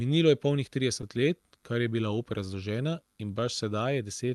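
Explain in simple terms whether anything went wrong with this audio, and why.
Around 1.01 to 1.05 s, the speech briefly hangs: the last sound is held for a fraction too long, with a faint buzz or dip, and then carries on from where it left off. This is a short stall from a late packet. A piece of audio arrived late, so the receiving end had nothing new to play and stretched what it had by about 16 ms to fill the gap. Nothing was actually lost.

From about 1.17 s to 4.31 s, little bits of sound are repeated here and there. These are repeated timing corrections. Playback runs at roughly 98% of normal speed, so the receiver keeps adding small slivers of repeated audio, about 50 ms in total, spread unevenly over that stretch. Each one is small.

The timing corrections come from clock drift between sender and receiver, which runs through the whole clip. The sending device's clock runs about 1.5% slower than the receiver's, so audio arrives a little too slowly. 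The receiver's holding area keeps running low, which forces the constant small patch-ups. The Opus call codec that carried the speech was working as it should.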